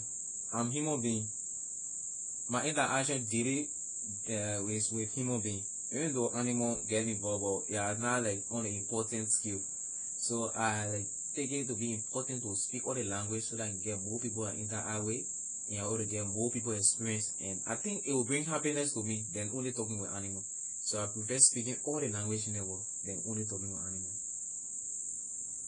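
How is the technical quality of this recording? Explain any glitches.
Quality is poor, with plainly audible codec damage throughout. AAC compression runs the whole clip. Nothing sounds above 10 kHz, so the speech is dull and smeared, with a warbling, fizzy edge on sibilants. The likely cause is a starved AAC-LC encoder, which fits a bitrate around 24 kbps.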